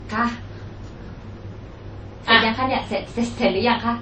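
Throughout, nothing sounds above 8.3 kHz, and two different artefact textures overlap rather than one codec's alone. This is likely transcoding between lossy codecs, with low-rate MP3 re-encoded as Vorbis.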